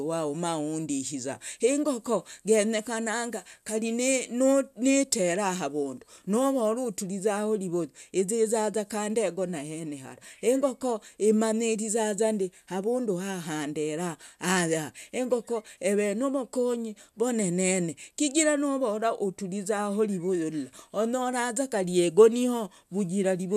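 Nothing in this speech recording stood out on listening.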